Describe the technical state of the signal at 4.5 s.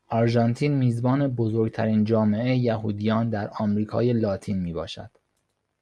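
At 4.5 s the speech signal is intact, with no audible fault at that moment.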